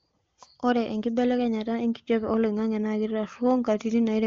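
Nothing goes wrong anywhere in the speech, which comes through AMR wideband (HD Voice) at its top rate of 23.85 kbit/s, where any mark the codec leaves is faint at most.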